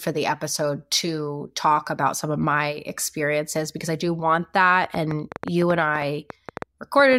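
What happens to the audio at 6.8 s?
At 6.8 s a train of clicks is ticking over the speech, part of a run from 4.84 to 7.14 s that begins after "because I do want": about 7 clicks a second, unevenly spaced, peaking about 10 dB above the speech. Likely interference or a faulty connection or power supply.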